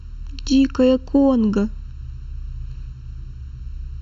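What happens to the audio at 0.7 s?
At 0.7 s the speech sounds hollow and phasey, as it does for the whole clip. This is channel delay, heard as comb filtering. One channel lags the other by under a millisecond. Summed to mono, they cancel in evenly spaced notches starting around 700 Hz.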